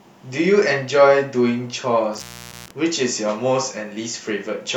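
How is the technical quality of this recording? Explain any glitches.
The recording has one glitch. From 2.14 to 2.71 s the speech drops out with a crackle at each edge, leaving faint hiss for about 0.44 s. This is an intermittent contact: a loose cable or plug briefly broke the signal path, then reconnected.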